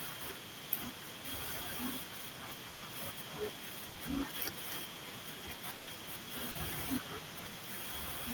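From 0.11 to 0.71 s, 0.9 to 1.26 s and 1.86 to 4.63 s there is an echo leak: a faint copy of the speech trails it by 257 ms at about 15 dB down. The likely cause is a loudspeaker echo canceller letting the far end's pickup return. On a spectrogram it appears as a weaker duplicate of the harmonic pattern, shifted right.

A burst of packet loss at 2.69 to 2.83 s fills 120 ms by stretching the last sound into a fading buzz or hiss before the audio resumes further on. A shorter burst at 3.89 to 3.97 s does the same over 60 ms. On a spectrogram each shows as flat, fading horizontal bands.

The echo returns from 4.83 to 6.34 s. Within it, another 120 ms burst of packet loss occurs at 5.75 to 5.89 s.

Short concealed packet loss at 6.51 to 6.57 s patches a 40 ms hole, heard as a brief smear.

From 7.0 to 7.9 s the echo leak is stronger, about 10 dB below the speech and still 257 ms late.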